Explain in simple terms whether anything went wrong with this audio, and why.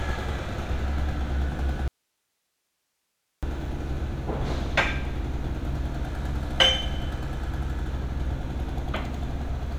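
The signal path most likely lost its input for a moment while the rest of the chain stayed switched on, causing an audio dropout to a faint residue. From 1.88 s to 3.43 s, about one and a half seconds, the sound cuts out abruptly and only a soft hiss remains, far quieter than the audio around it. The sound then returns just as suddenly. A natural pause or fade would not start and stop this sharply.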